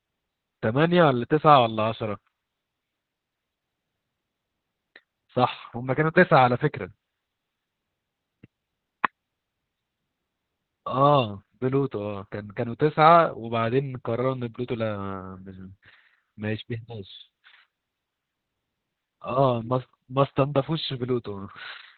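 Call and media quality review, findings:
Speech muffled, hoarse and faintly robotic, whole clip; nothing above 4.3 kHz. Opus voice compression, SILK in narrowband: band cut to 4 kHz, linear-prediction excitation coded coarsely. Heavy damage points to roughly 8 kbps.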